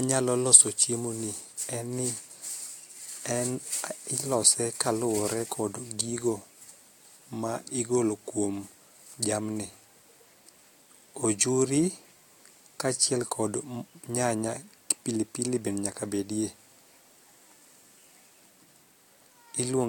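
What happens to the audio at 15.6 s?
Nothing goes wrong at 15.6 s; the speech carries on intact through that moment with no dropout, click or distortion.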